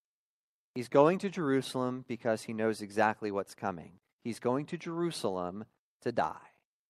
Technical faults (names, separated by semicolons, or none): none